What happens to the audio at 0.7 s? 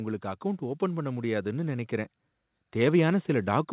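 At 0.7 s the level is partway through an automatic gain rise, running from 0.21 to 2.2 s, where the AGC lifts speech and background together by about 5 dB.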